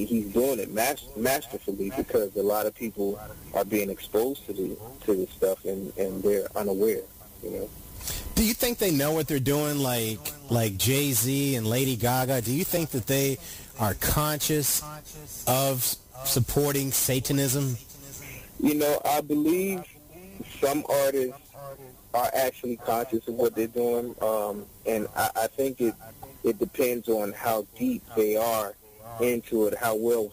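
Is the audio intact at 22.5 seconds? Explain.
No. 22.5 s lies within a run of periodic USB or driver dropouts from 15.8 to 23.8 s. About every 2.0 s, a blocked bus or driver drops a sliver of audio, well under a millisecond, and fills it with silence. Each gap sounds as a tick over the signal, and 22.5 s falls between two of them.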